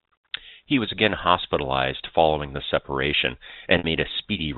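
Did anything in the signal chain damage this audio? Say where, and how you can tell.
Yes. At 3.78 s the speech briefly turns into a held, slightly buzzy tone that dies away, and the audio returns at 3.84 s through a short cross-fade. This is packet loss with pitch repetition at the network stage. About 60 ms of audio never arrived, which fits three 20 ms packets. The receiver concealed the gap by repeating the last pitch period and fading it out. The G.711 telephone coding itself adds no audible damage.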